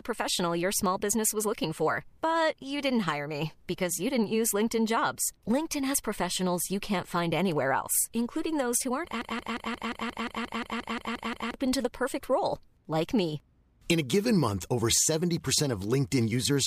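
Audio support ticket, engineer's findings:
Broken-record loop, 9.21–11.54 s, after "including those who aren't": a 176 ms speech fragment repeats exactly 13 times, then resumes at "to the perfect role". Likely a stalled player or stream resending its last buffer. The repeats are identical and don't decay like an echo, and the speech in that span is lost.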